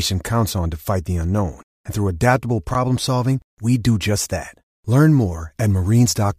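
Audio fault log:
2.71–2.75 s, chunks out of order: a brief jumbled stutter in the speech. One 10 ms chunk plays three chunks late, after the audio that should follow it. Nothing is lost, but the reordering leaves three hard, mismatched joins.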